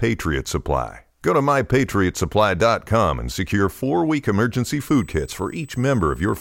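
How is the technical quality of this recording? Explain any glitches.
The recording has one clear fault. USB whine runs from 4.80 s to the end at 6.40 s: current drawn by the USB bus in 125-microsecond microframes leaks through power or ground, producing a fixed-pitch 8 kHz whistle sitting roughly 30 dB below the speech.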